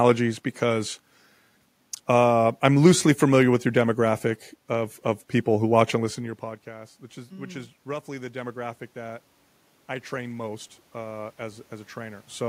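At about 6.0 s the talker moves back and the level at the microphone drops by about 19 dB. From 5.96 to 9.28 s the automatic gain rising compensates, lifting gain by about 6 dB, so voice and room noise swell together. It rises again by about 4 dB from 10.09 to 12.31 s. On the waveform the envelope widens slowly, and the spectrogram's noise floor brightens in step with the speech.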